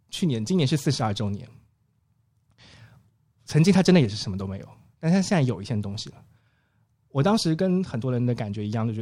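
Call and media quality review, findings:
No technical faults were found in the speech signal; level, continuity and timing hold steady across the recording.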